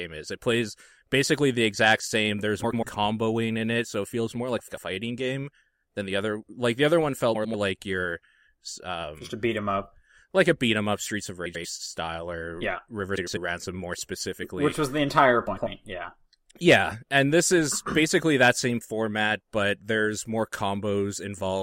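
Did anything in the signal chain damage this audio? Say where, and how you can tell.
Yes: frames out of order at 2.63, 4.58, 7.34, 11.45, 13.17 and 15.47 s, each lasting about 0.2 s. At each point a short stretch of the speech plays with its two halves, each roughly 93 ms, swapped, giving a garbled flutter. This is a network or transport fault: two adjacent runs of coded frames, each consistent with four frames, reached the decoder reversed, so the sound is reordered but no time is lost.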